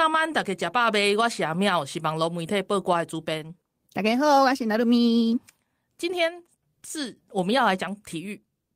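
Speech recording with no audible technical faults.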